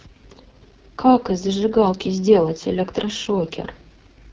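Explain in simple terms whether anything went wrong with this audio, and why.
AMR wideband (HD Voice) codec, throughout: at a very low data rate, this phone codec rebuilds speech from a simple voice model, leaving it rough and raspy.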